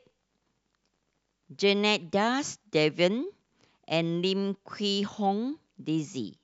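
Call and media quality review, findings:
No findings from the call and media quality review.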